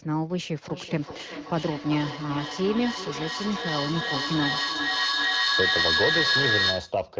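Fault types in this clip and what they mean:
Feedback echo between two devices: from 0.68 to 7.11 s, the speech returns roughly every 0.4 s as a second device in the room replays it into the microphone, beyond either echo canceller's reach. The repeats build rather than fade, peaking about 2 dB above the speech.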